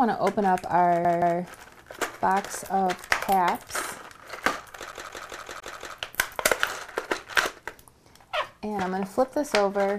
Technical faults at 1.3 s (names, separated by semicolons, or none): CD stuck on one turn